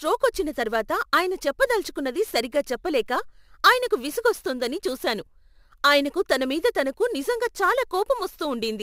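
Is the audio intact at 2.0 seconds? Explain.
No. Sample clock jitter runs throughout. Mistimed samples, roughly 7 µs off, add hiss about 25 dB below the speech, strongest on loud, bright sounds.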